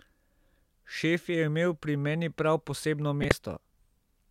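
A corrupt frame decoded runs from 3.22 to 3.41 s in this speech clip, a stretch of about 0.19 s covering a run of roughly seven consecutive damaged frames. Flipped bits in the compressed data went undetected, so the decoder read wrong gains and codes and rebuilt energy at frequencies that don't belong there. It comes through as a harsh burst of chirpy, squeaky noise riding over the speech, loud enough to peak somewhere near -10 dBFS.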